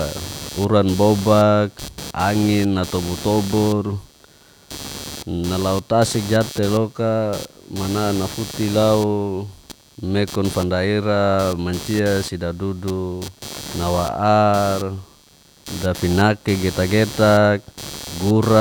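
From start to finish the speech carries computer activity noise: a buzzy, chirping pulse train near 150 Hz, fairly loud beneath the speech, as processor or graphics load disturbs the shared audio ground. Unlike steady mains hum, it follows the machine's activity rather than the sound.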